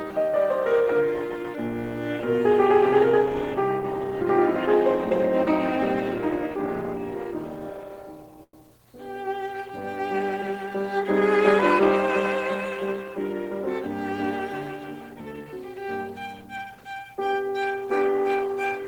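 At 8.43 to 8.54 s the music hangs in a short stall from a late packet: the jitter buffer ran dry and the last sound was stretched for 99 ms, with a slight buzz or dip, then resumed from the same point. Unlike a lost packet, nothing is skipped; playback simply runs about 99 ms later.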